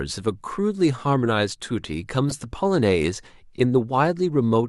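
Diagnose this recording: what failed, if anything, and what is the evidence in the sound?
Codec stage: a corrupt frame was decoded. A brief chirp-like burst from 2.29 to 2.32 s, around -15 dBFS, spans a couple of frames whose damaged bits misplaced spectral energy.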